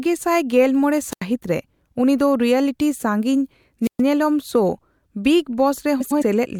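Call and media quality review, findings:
Wireless microphone squelch dropout at 1.11–1.22 s and 3.83–4.02 s. Hiss rises, then near-silence of about 85 ms and 124 ms as the receiver mutes on a fading RF signal.

Frames out of order at 6.00–6.22 s. Two adjacent blocks of about 104.5 ms play swapped, which fits four-frame runs. The result is a garbled flutter.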